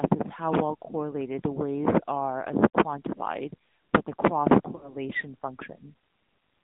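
From start to finish the speech carries the AMR narrowband mobile codec sound. Everything above 4 kHz is gone, so the voice is thin and boxed-in. Because the codec rebuilds speech from a vocal-tract model fed by a few excitation pulses, the damage is plainly audible: the voice has a buzzy, synthetic edge. At this bit budget the sound fits one of the lower AMR-NB modes, around 7.4 kbps.

Between 4.76 and 4.96 s there are lost AMR speech frames. About 60 ms of coded speech never arrived intact, which fits three consecutive 20 ms frames that failed their checks. The decoder covered the gap by repeating the last good pitch and vocal-tract settings with decreasing gain. The result is a smeared, held sound that sags in level and blurs for about 0.2 s before normal decoding resumes.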